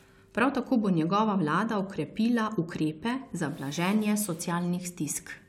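No technical faults can be heard anywhere in the speech recording; the signal stays steady and intact throughout.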